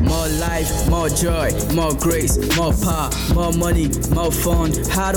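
Mains hum at 60 Hz runs throughout, a steady low drone from power-line coupling, only about 10 dB under the sound; spectrograms show a flat line there plus harmonics.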